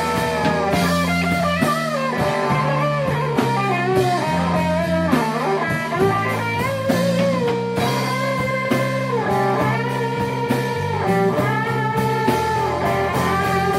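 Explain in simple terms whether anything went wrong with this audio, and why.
From 2.18 to 6.18 s, the adaptive stream switched to a lower bitrate. It sounds suddenly duller, with nothing above 14.9 kHz.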